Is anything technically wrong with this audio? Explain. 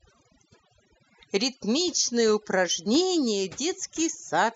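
Yes, two faults are audible.

Overdone noise removal runs through the whole speech clip. A noise reducer set too hard has cut frequency bands near its noise estimate along with quiet speech detail, leaving near-silent gaps with twinkling specks. Unlike a plain low-pass or codec dulling, the background itself is hollowed out.

Clock slip clicks run from 0.11 s to 4.52 s, faint ticks about every 0.1 s, around forty in all. They are likely caused by two unsynchronised device clocks, which fits a mismatch of around 200 ppm, with one sample dropped or repeated at each slip. The strict, even spacing distinguishes them from random crackle or dropouts.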